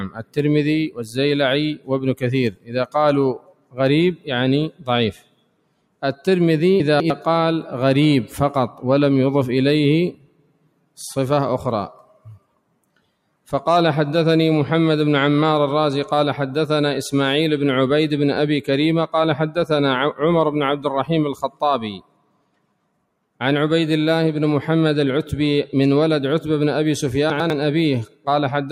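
Throughout the audio, level pumps and thins as sustained parts sink and sharp onsets push through, a swing of around 10 dB. This is a noise suppressor applied to music or sounds: a speech-tuned processor treats steady material as noise to be removed.

The deepest dips are sound cut by the noise suppressor, where held and decaying material drops by about 18 to 19 dB and tails are clipped short. This happens at 0.09 to 1.17 s, 1.75 to 6.02 s, 10.12 to 10.98 s, 11.94 to 13.51 s, 20.77 to 23.4 s and 28.06 to 28.27 s. The suppressor's gain clamps down harder here, for roughly 0.2 s up to two seconds of each stretch.

At 6.8 to 7.1 s the audio jumbles briefly. These are chunks out of order: a 100 ms chunk plays two chunks late, so nothing is missing but the sequence is scrambled. The same happens at 27.3 to 27.5 s, one chunk late.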